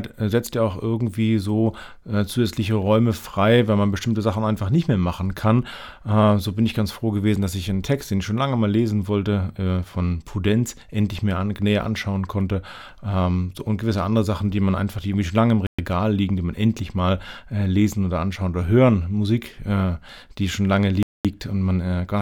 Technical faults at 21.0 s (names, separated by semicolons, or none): Bluetooth stall